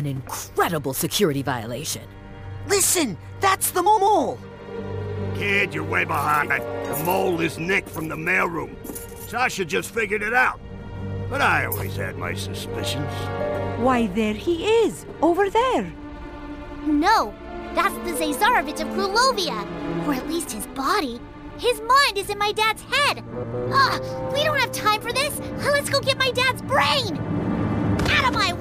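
Frames out of order at 3.86–4.08 s, 6.42–6.59 s and 23.32–23.54 s: two adjacent blocks, each about 104 ms (about 78 ms in the second), play swapped, which fits blocks of four and three frames, giving a garbled flutter, losing no time.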